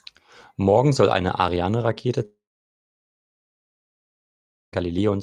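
A long network dropout, likely, runs from 2.25 to 4.74 s: speech stops, a brief fading buzz gives way to about 2.4 s of near-silence, and roughly 2.5 s never returns.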